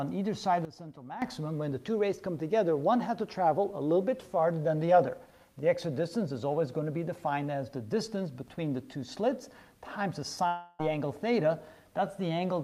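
From 0.65 to 1.22 s, a sudden gain jump: the digital gain was likely switched between samples with no ramp, dropping by about 13 dB and then restoring. The sound and its background noise fall and rise in level together, abruptly, at both edges.

At 10.47 s, a long network dropout: likely about 320 ms of audio never arrived. The receiver filled roughly 315 ms by extending the last sound as a fading buzz or hiss, with no full silence. At 10.81 s the audio resumes further on, without the lost part.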